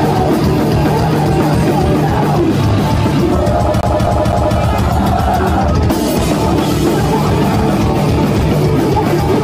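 At 3.81 s the audio gets caught in a CD stuck on one turn. A scratch keeps knocking the laser back to the same spot, so a 256 ms slice plays three times, with a short mute at each jump. That gives a quick, even stutter, and it clears at 4.58 s.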